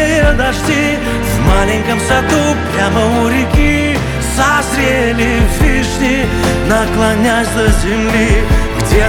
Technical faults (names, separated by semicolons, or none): none